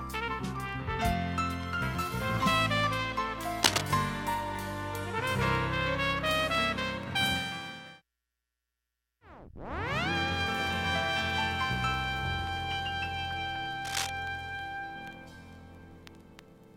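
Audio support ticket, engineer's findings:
Cable scratch noise, 3.63–3.81 s and 13.85–14.1 s: brief rasping bursts, first somewhat above the signal, second somewhat below. Likely a worn cable or connector shifting, with contact resistance fluctuating.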